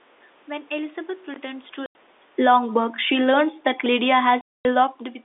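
At 1.86 to 1.95 s, packet loss filled with silence cuts a 90 ms hole with hard edges. Unlike smoothed concealment, the gap is dead silent, and its length fits 30 ms packets. From 2.26 to 3.31 s, automatic gain falling lowers the level by about 5 dB. The room background sinks along with the speech, which separates it from the talker's own movement near 1.5 s. A second fall of about 3 dB runs from 3.83 to 5.06 s. Inside it, another packet-loss silence opens from 4.41 to 4.65 s, a 240 ms hole with the same hard edges.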